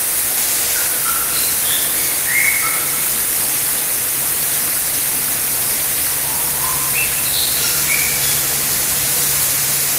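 Nothing stood out as a technical fault on listening to this recording of everyday sounds.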